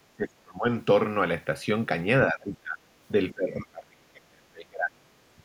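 Speech that drops away three times, at 0.13 to 0.67 s, 2.3 to 2.8 s and 3.32 to 5.08 s, sinking by up to around 35 dB: likely speech suppressed in double talk by an echo canceller.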